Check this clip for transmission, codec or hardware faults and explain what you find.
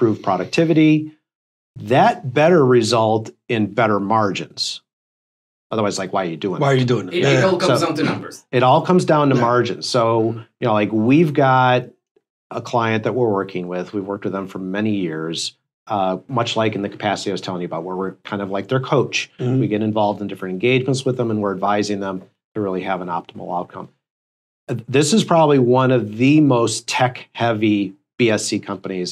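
Nothing found: no transmission, codec or hardware faults are audible anywhere in the clip.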